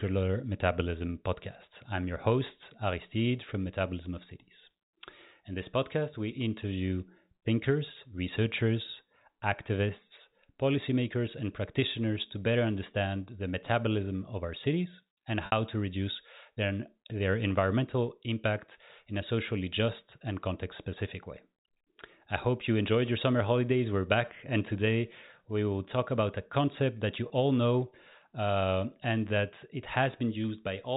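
Speech over a G.711 telephone path has two brief packet losses with pitch repetition: 60 ms at 15.46 s, after "of our cities and", and 20 ms at 27.28 s, before "know uh and that". Each gap is bridged by repeating the last pitch period: the 20 ms gap sounds like a held, buzzy note, while in the 60 ms gap the repeat fades out over about 50 ms toward silence before the speech cross-fades back in.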